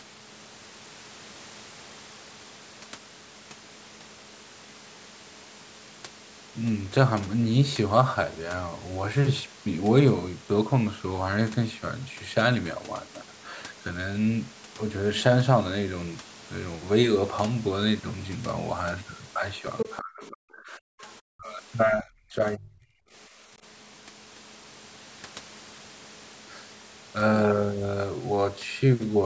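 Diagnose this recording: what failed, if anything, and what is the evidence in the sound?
The call processing's echo cancellation failed. From 19.78 to 19.95 s, a second voice briefly sits under the talker, only slightly quieter than the main speech. This is likely the other side's voice leaking through: loudspeaker sound reached the microphone and the echo canceller left a residue.

Speech suppressed in double talk follows in the same call-processing stage. The talker's level collapses from 19.85 to 21.05 s, 21.34 to 21.59 s and 21.84 to 23.04 s. The drops are deep, several tens of dB at worst. The canceller likely mistook overlapping talk for echo and ducked both.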